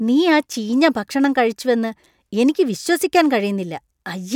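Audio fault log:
Nothing to log here: the speech comes through with no audible faults anywhere in it.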